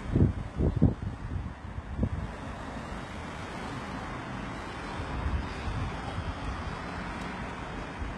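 HE-AAC compression runs through the whole clip and is the likely cause of heavily damaged treble. The upper spectrum sounds synthetic and gritty, with a metallic sheen where the high frequencies should be, and nothing is present above about 11.8 kHz. This is what happens when the codec stores only the lower bands and rebuilds the top by copying them upward, so the treble doesn't line up with the sound beneath it. The damage points to a very low bitrate, around 16 kbps.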